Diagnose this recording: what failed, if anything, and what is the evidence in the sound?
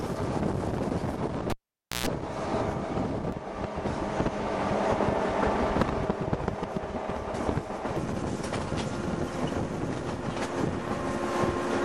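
Analogue wiring: a cable pulled and plugged in, 1.50 to 2.07 s. You get a pop, 0.52 s of near silence, then 125 ms of 60 Hz mains buzz while just the plug tip makes contact, and a second pop as the signal reconnects.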